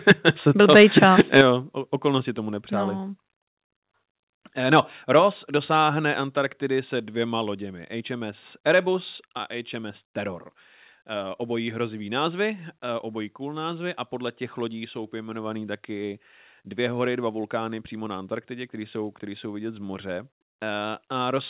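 From 0.08 to 0.29 s the speech breaks into a harsh, crackling edge, which sounds like microphone overload, likely from input gain set so high that peaks ran about 7 dB past the converter's ceiling. On a waveform the loudest cycles are sheared flat, roughly 2% of samples in this stretch. On a spectrogram, broadband smear rises above the syllables, limited here by the call path's empty band above 4 kHz. Inside that burst, at 0.12 s, the level drops abruptly by about 4 dB, a microphone volume stepped down event. It is likely the call software trimming the device input after detecting clipping. The waveform envelope shrinks in a single step, and both speech and background get quieter together.

A second overload runs from 0.6 to 1.41 s, with about 3% of samples flattened, again about 7 dB over, and the same gritty crackle on the peaks. It ends with the largest step down, about 8 dB at 1.41 s, just before "okolnosti tomu nepřáli". 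The envelope drops sharply there and the spectrogram dims evenly across all frequencies.

Three smaller steps follow with no audible distortion before them: about 3 dB at 5.19 s, about 2 dB at 6.21 s just before "se dvěma loděmi", and about 2 dB at 9.39 s. Each is a sudden drop in level, and each appears as a clean stair in the waveform envelope.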